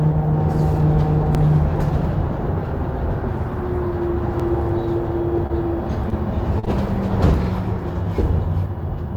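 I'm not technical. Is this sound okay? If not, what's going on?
No. There are two separate problems. The first is overlapping chunks: at 1.35, 4.40 and 7.44 seconds, about 48 thousandths of a second of sound plays twice, giving a small stutter. These repeats come about three seconds apart, which shows the audio was handled in three-second pieces that overlap slightly.

The second is short concealed packet loss: small bits of sound never arrived, and the system filled each gap by guessing from the sound just before it. These come at irregular moments, around 5.47 and 6.09 seconds, and in a longer run from 6.59 to 6.68 seconds. Each one sounds like a brief smear or wobble rather than a clean repeat.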